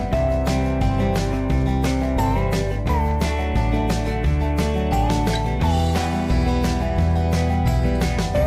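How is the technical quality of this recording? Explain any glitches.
Nothing in the recording stands out as a glitch; it simply runs along without any dropouts, clicks or other technical hiccups to point to.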